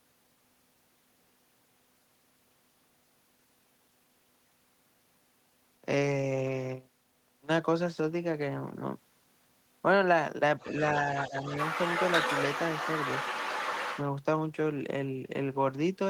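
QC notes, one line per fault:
10.59–10.83 s and 11.11–14.04 s, other side's voice leaking through: a second voice, faint at first, then nearly as loud as the talker, likely loudspeaker echo the canceller left in.
11.29–11.35 s, speech suppressed in double talk: the talker briefly dips about 10 dB while the leaked voice overlaps, likely as the canceller turns both down together.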